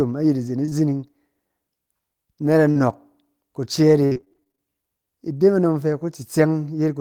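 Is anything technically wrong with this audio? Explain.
Yes. At 0.65 to 0.73 s and again at 2.71 to 2.77 s the speech briefly smears and wobbles, as if a sliver of sound is stretched over a hole. This is short concealed packet loss: 20 to 40 ms of audio arrived too late, and the receiver continued the previous sound before blending back.

From 4.05 to 4.60 s the speech turns choppy, with pieces dropping out. This is repeated packet loss (robotic sound): about a dozen closely spaced holes, the longest 57 ms, were patched one after another, so roughly half that stretch is synthesised rather than real.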